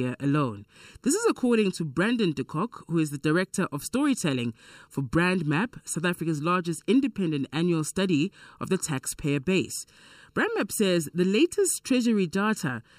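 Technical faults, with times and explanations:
Throughout: channel delay (comb filtering). One channel runs roughly 0.7 ms late, and summing to mono cancels shared content at evenly spaced frequencies from around 700 Hz upward, giving hollow, phasey speech. A spectrogram shows fixed dark horizontal notch bands across the whole clip.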